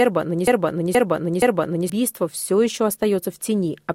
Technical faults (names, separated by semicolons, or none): broken-record loop